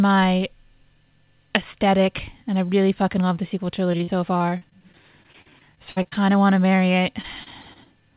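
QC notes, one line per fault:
3.92–6.18 s and 7.22–7.88 s, repeated packet loss (robotic sound): the first stretch has 19 gaps, the longest 57 ms, with about 0.43 s patched (roughly a fifth of the span). The second has 5 gaps, the longest 28 ms, with about 0.1 s patched. Each hole is bridged by looping the last waveform period, so the sound turns choppy. On a spectrogram, harmonics freeze into flat, repeated bands within the 4 kHz ceiling, with small breaks between them. The waveform shows copied cycles where the natural envelope should be.
6.76–6.80 s, short concealed packet loss: a single 20 ms hole is filled by extending the preceding sound and then crossfading back into the real signal. This is heard as a brief smear or wobble. On a spectrogram it appears as a thin slice where the pattern stretches smoothly instead of evolving. The waveform shows a few repeated periods that join the following audio without a hard edge.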